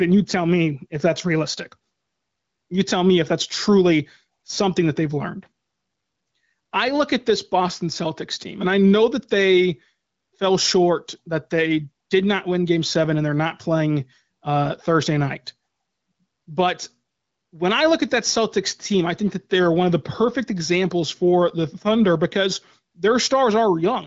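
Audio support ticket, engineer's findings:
Gain pumping throughout. Likely cause: input gain set far too high, with a fast limiter clamping down on each loud speech burst. Gain swing of about 10 dB; dynamics squashed. AMR-WB path intact, nothing above 7.6 kHz.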